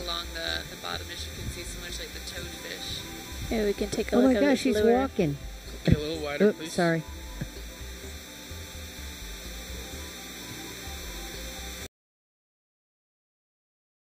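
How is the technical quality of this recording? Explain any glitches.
One clear glitch: an audio dropout to silence at 11.86 s runs to the end, about 2.2 s of silence, likely from lost input. The sound cuts off abruptly with no room tone, and the waveform becomes a flat line while the spectrogram turns completely blank.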